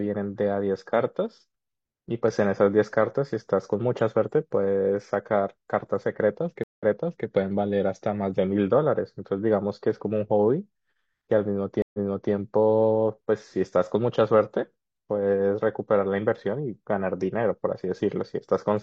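At 6.64 s and again at 11.82 s the speech drops out for about 150 ms and 120 ms, then resumes roughly 0.47 s and 0.38 s earlier, repeating what was just heard. Each is a stream reconnect: the connection broke, the player restarted its decoder mid-stream, and the server resent a burst of already-played audio.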